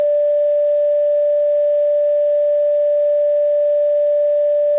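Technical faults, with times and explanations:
No technical faults can be heard in this music clip. It has come over a WebRTC call path, and nothing reaches above 4 kHz, which fits the G.711 A-law codec.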